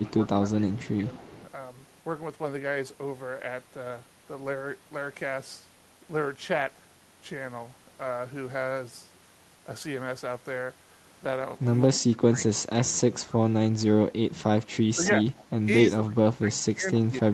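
A speech recording in which the talker is pushed down in level five times. Each dip points to speech suppressed in double talk, likely caused by an echo canceller that turned everything down while the far side was also talking. The short dips come at 0.0 to 0.14 s and 0.67 to 0.88 s, each cutting about 10 to 15 dB. Longer, deeper ones follow at 11.94 to 13.28 s, 13.85 to 15.26 s and 15.84 s to the end, falling by roughly 20 to 25 dB. An echo leak is also audible, likely from a loudspeaker's echo canceller letting some sound back into the call. A faint delayed copy of the voice trails 255 ms behind at 0.86 to 1.51 s and again at 15.04 to 15.44 s. It sits about 20 to 25 dB below the speech. The high end of the sound stops near 12 kHz, consistent with an Opus call path.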